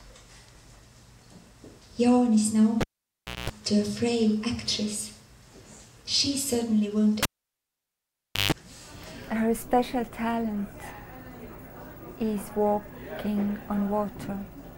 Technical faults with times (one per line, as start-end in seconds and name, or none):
2.81-3.50 cable pulled and plugged in
7.23-8.52 cable pulled and plugged in